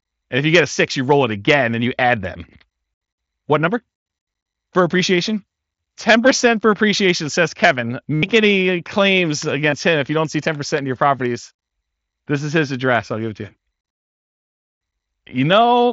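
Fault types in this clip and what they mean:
Concealed Bluetooth headset packet loss: voice packets from the headset went missing, and the phone filled each gap by looping the best-matching recent stretch of waveform. Runs of about 82 ms at 8.14 s and 60 ms at 14.75 s become a held buzzy tone with a slight warble on recovery. A 15 ms gap at 9.71 s is also concealed. Spectrograms show flat, evenly spaced harmonic stripes; waveforms show one short cycle repeating at unchanging level.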